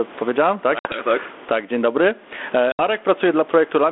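Gain pumping runs through the whole recording. The microphone gain is likely set far too high, so a fast limiter or compressor clamps down on every loud syllable and releases in the pauses, swinging the level by about 15 dB. Loud and soft passages are pressed close together into a flattened, squashed sound.

Packet loss on an ADPCM call cuts in twice. Right after "powiedziałem tak", at 0.79 s, about 60 ms of audio drops out, which fits roughly seven lost packets. After "dzień dobry", at 2.72 s, a similar gap of about 70 ms follows. Each loss leaves a hard-edged hole of silence, and the G.726 decoder's adaptive predictor and step size lose track of the sender's. The speech comes back slightly distorted before settling: by about 1.02 s after the first gap and by about 2.82 s after the second.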